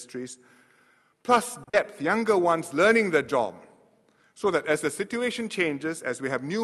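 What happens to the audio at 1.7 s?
Around 1.7 s there is a short stall from a late packet, spanning 1.63 to 1.84 s. A packet arrived after it was due, so the jitter buffer ran empty. The receiver held the last sound for about 40 ms until the data came in, then resumed from the same point. Nothing is lost, but the sound hangs slightly too long with a faint buzzy dip, and everything afterwards runs about 40 ms later.

Inside that stall, from 1.69 to 1.75 s, there is also a short concealed packet loss. About 40 ms of audio never reached the decoder in time, so the receiver invented a continuation of the preceding sound and blended back into the real signal. This is heard as a brief smear over that stretch, where the original detail is replaced by a synthetic fill.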